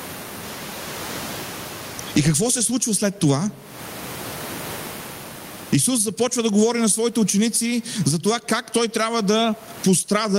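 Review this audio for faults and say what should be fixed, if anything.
Gain pumping runs through the whole clip. Room noise sits about 37 dB below the speech, and the gain swings by roughly 25 dB. The likely cause is microphone gain set far too high, with a fast limiter clamping every peak. On a waveform, the envelope looks flattened and the noise floor rises between phrases. A spectrogram shows the background brightening in the gaps and darkening under speech. To prevent it, lower the input gain so peaks sit well below the limiter threshold.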